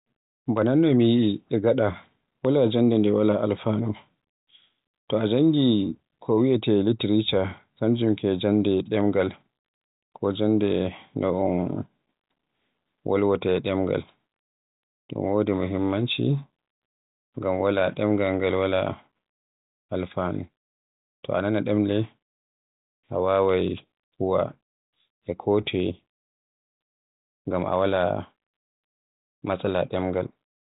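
No technical faults can be heard anywhere in the recording. The speech passes through G.726 ADPCM at 40 kbit/s, which leaves at most a faint trace of coding noise, and the band stops at about 3.8 kHz, giving it the narrow telephone sound that codec always has.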